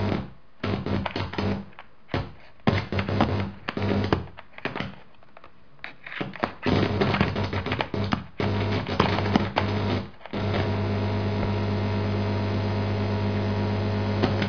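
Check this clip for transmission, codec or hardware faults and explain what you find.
Nothing to flag here. I listened through the whole recording and didn't catch a single problem worth pointing out.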